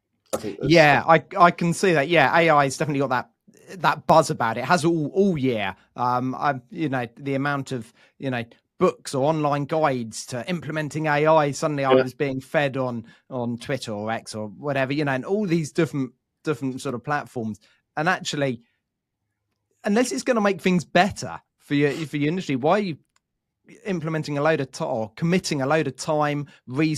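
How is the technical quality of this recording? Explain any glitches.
The recording has two brief glitches, single sharp clicks at 4.10 s and 16.89 s in the speech. Both are likely dropped samples. A fraction of a millisecond of audio goes missing, so the waveform leaps straight from one value to a later one. That step is heard as a click and seen as a thin vertical line across the spectrum. Unlike a dropout, no sound is audibly removed, and there's no gap or silence, only the instantaneous tick.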